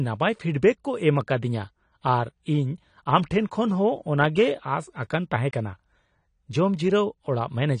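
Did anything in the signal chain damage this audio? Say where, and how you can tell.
Yes, at the codec stage: throughout, nothing reaches above 10 kHz and coding damage is plainly audible, likely AAC compression, with a lowered cut-off that fits about 32 kbps AAC-LC.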